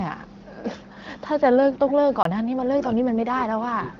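A short speech recording carries three distinct faults. Faint delayed copies of the voice surface at 0.83 to 0.9 s, 1.15 to 1.21 s and 3.95 s to the end, each trailing the original by 330 ms and sitting far below it, barely audible at 0.83 s and a little stronger at 1.15 s. This is likely an echo leak, where a loudspeaker's output at the far end slipped past its echo canceller and was sent back. The fixed 330 ms lag and the fact that the copy repeats the same voice set it apart from room reverberation, which would smear continuously rather than return as a distinct late scrap. At 2.23 s the sound drops to a block of digital silence lasting 23 ms, which fits a 1024-sample buffer that was not filled in time. The cut is abrupt at both edges, and the hole is silent rather than merely quiet, unlike a dropout concealed by a codec. From 2.65 to 2.94 s and again from 3.15 s to the end, the voice sags by around 20 to 25 dB, most likely speech suppressed in double talk as an echo canceller ducked the talker while the other side spoke.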